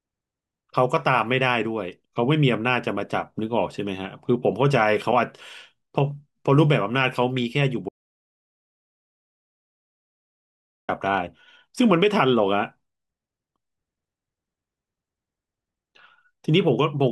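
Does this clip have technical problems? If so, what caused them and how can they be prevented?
Yes, there's one clear problem: an audio dropout to silence from 7.89 s to 10.89 s, so roughly 3 s of speech is simply gone. The sound cuts off mid-flow and the gap is dead digital silence, with no room tone at all. The likely cause is the input dropping out, from a loose cable, a flaky wireless link or an accidental mute, while the recorder kept writing zeros. Securing connections and monitoring the input live while recording would prevent it.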